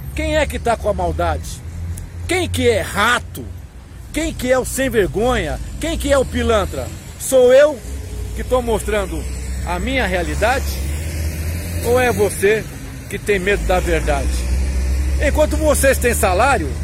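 From 11.82 s to the end at 16.83 s the audio carries a gritty, inharmonic fizz typical of crude rate conversion, consistent with linear interpolation from 44.1 kHz to 48 kHz. Error sits roughly 30 dB down, appearing on a spectrogram as faint, unrelated lines beneath loud, high content.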